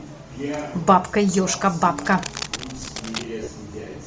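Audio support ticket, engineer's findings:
Codec, throughout: upper band of the speech stripped and refilled with noise, giving a breathy, grainy edge. Plainly audible damage, likely Bluetooth LC3 compression in 7.5 ms frames, consistent with a low rate around 32 kbps.

1.95–3.24 s: connector or cable contact resistance fluctuating as something is moved. Dense, uneven scratching and rustling laid over the speech, roughly 10 dB below it. Fits cable scratch noise.

3.43–3.47 s: lost LE Audio frames, a gap of about 37.5 ms, which fits five 7.5 ms frames dropped. Decoder repeats the last spectrum with scrambled phase, smearing the speech into a brief noisy blur.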